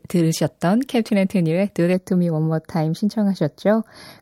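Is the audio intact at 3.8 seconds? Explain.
No, channel delay (comb filtering) runs from 1.93 s to the end: one channel lags by roughly 0.2 ms, so the mono sum notches near 3 kHz, sounding hollow.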